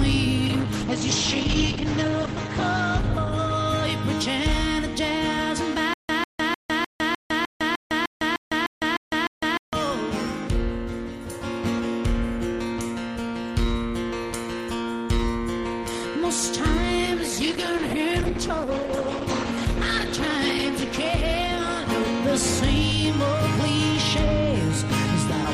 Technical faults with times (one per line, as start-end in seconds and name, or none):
0.46-5.15 call bitrate drop
5.94-9.73 stutter with silent gaps
17.06-24.45 call bitrate drop